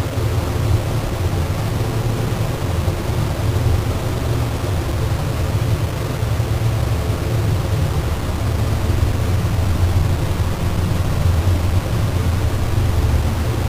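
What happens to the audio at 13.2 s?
Low bit depth without dither is present at 13.2 s, as it is across the whole clip. The sound is held to very few amplitude steps, which fits about a 4-bit signal, likely rounded to the nearest step with no dither added. Because the rounding error tracks the waveform, it comes out as harsh, grainy distortion that shifts with the sound. The grit sits only about 15 dB below the signal, and the quietest parts sputter between steps or fall silent.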